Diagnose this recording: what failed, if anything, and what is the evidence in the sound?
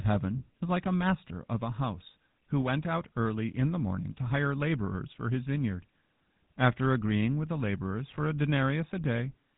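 It's a codec-stage problem: GSM full-rate compression across the whole clip. The speech sounds buzzy and gravelly, with nothing above 4 kHz, which fits the old 13 kbps pulse-excited vocal-tract coder.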